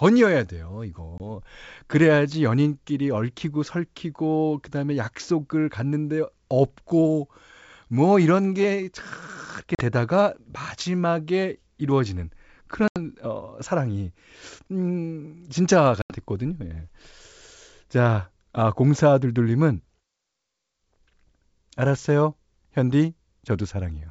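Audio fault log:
1.18 s, 9.75 s, 12.88 s and 16.02 s: packet loss on an ADPCM call. Hard-edged silent holes of 20, 40, 80 and 80 ms, roughly a couple to several packets each. The G.722 decoder's adaptive predictor and step size fall out of step, so the sound returns slightly distorted before settling.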